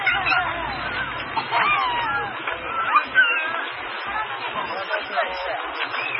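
Everyday sound, audibly band-limited with nothing above 5.5 kHz, watery swirling and smeared attacks throughout, likely heavy MP3 compression at a bitrate near 16 kbps.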